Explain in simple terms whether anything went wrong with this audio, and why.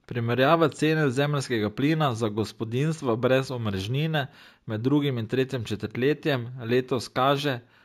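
Imaging from linear upsampling runs through the whole clip. The speech sounds like it was converted to a higher sample rate by joining the original samples with straight lines, a crude method that leaves a faint mirrored copy of the sound between 8 and 16 kHz, heard as a slight metallic shimmer.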